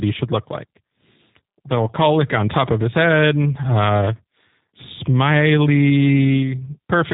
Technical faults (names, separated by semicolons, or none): G.729 codec